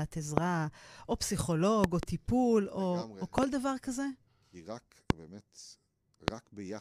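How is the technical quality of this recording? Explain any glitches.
The recording is marred by loud pops, sharp thumps around 20 to 25 dB above the speech, at 0.38–0.40, 1.84–2.05 (a double pop), 3.38–3.45 (another double), 5.10–5.12 and 6.28–6.30 s, with the speech continuing beneath them. Each is likely a voltage spike from a connector, switch, static or driver glitch, shaped by the downstream circuitry.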